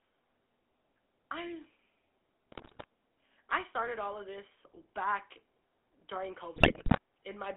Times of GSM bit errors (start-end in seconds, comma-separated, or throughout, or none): 2.52-2.85, 6.56-6.98